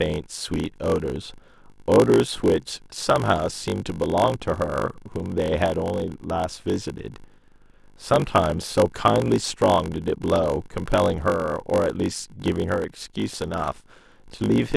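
A steady 50 Hz buzz runs through the whole speech clip, which also drags at about 0.92 times normal speed. This is a padded block size mismatch: every block arrives short and is topped up with silence.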